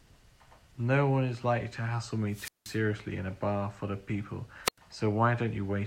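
Static swells and the speech drops to silence after "is likely to hassle" (2.30 to 2.78 s, 180 ms mute) and after "bar full of people" (4.64 to 4.78 s, 93 ms): wireless microphone squelch dropout, the fading radio signal tripping the receiver's mute.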